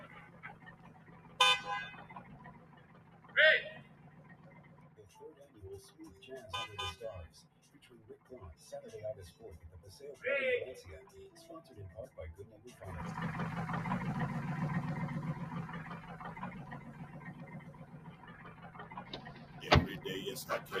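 A noise suppressor built for speech was left running on this audio, a case of a noise suppressor applied to music or sounds. It treats sustained tones, ambience and decaying tails as noise and pulls them down while letting sharp onsets pass, so the level swings by about 15 dB across the clip. The result is audible pumping and a thinned, fluttering quality wherever the sound holds or fades.

Sound cut by the noise suppressor shows up in seven spots. The worst dips, about 8 dB, run from 0.06 to 1.39 s, 1.99 to 3.35 s, 3.81 to 5.12 s, 7.35 to 8.3 s and 17.39 to 19.62 s. Shorter, shallower dips of about 7 dB fall at 5.4 to 5.56 s and about 5 dB at 16.88 to 17.19 s. In each, the held portions and tails sink and get clipped short while transients stay up front.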